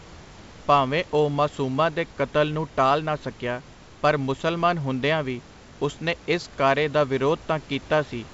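No technical faults are present in this speech recording: the room's background noise sits about 23 dB below the speech, and the signal shows the band limit of G.722 wideband telephone coding, with nothing above 7.7 kHz and at most a faint trace of coding texture, which fits the codec's full 64 kbit/s mode.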